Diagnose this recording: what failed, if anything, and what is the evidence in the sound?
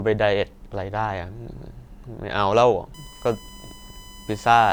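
USB whine got into the analogue wiring, through power or ground. From 2.94 s to the end there's a fixed-pitch tone on 1 kHz, loudest at its 3 kHz harmonic, about 25 dB below the speech. That's the bus's 1 ms frame current bleeding into the audio path.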